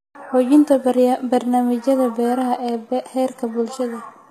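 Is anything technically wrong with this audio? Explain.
Yes. The whole speech clip has plainly audible codec damage that sounds like HE-AAC compression, likely at a low bitrate of around 20 kbps. Nothing reaches past about 14.9 kHz. The top end is rebuilt rather than real: the codec copies lower bands upward and shapes them roughly, so the treble harmonics don't line up with the ones below. Listen to the s sounds: they come out gritty and metallic.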